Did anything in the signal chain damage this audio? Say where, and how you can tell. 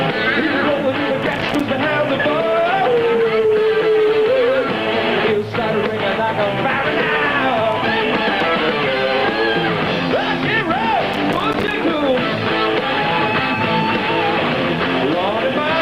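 Yes: processor overload crackle at the driver or buffer stage, from 1.23 to 1.61 s and again from 11.14 to 11.71 s. Roughly 15 and then 20 hard-edged silent gaps, each about one buffer of roughly 5 ms long, show repeated missed deadlines, a gritty burst rather than one clean dropout.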